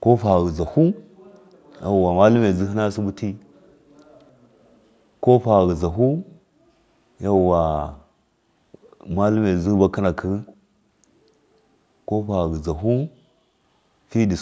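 A faint echo leak at 4.03 to 4.29 s and 10.46 to 10.55 s repeats the speech 300 ms late, a discrete delayed copy rather than reverberant smear, likely from an unsuppressed loudspeaker path.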